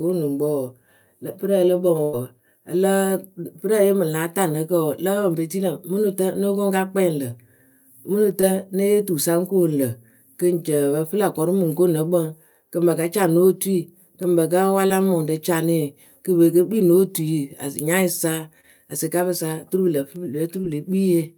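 At 2.03 to 2.15 s there is a burst of packet loss: about 100 ms of speech never arrived in time, and the receiver stretched the last sound across the hole for roughly 95 ms while fading it down. The result is a held buzz or fading hiss, after which the talker resumes with a chunk simply gone. Its length and that audible skip set it apart from the briefer concealed losses later on.

Short concealed packet loss then appears four times, at 8.41 to 8.44 s, 14.86 to 15.01 s, 18.61 to 18.65 s and 20.61 to 20.65 s. Each time 20 to 40 ms went missing, and the decoder patched it by extending the preceding pitch or noise before crossfading back. These are heard as a quick smear or wobble rather than a held tone, and a consonant may drop out. At 14.86 s the patch also adds a little extra time.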